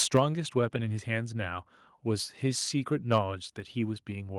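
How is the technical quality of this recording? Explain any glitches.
The speech has two abrupt level drops. Microphone volume stepped down at 0.17 s and 3.6 s, likely the call software cutting the input volume in single steps. Voice and background fall by about 4 dB, then about 3 dB.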